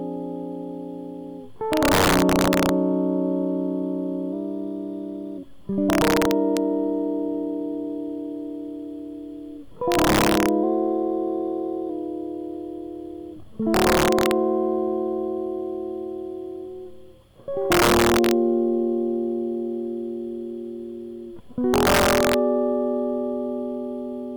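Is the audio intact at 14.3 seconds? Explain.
No. Integer overflow runs from 13.74 to 14.31 s: music peaks driven about 4 dB over the limit wrap to the opposite sign, giving violent cracks far sharper than clipping's flattened tops.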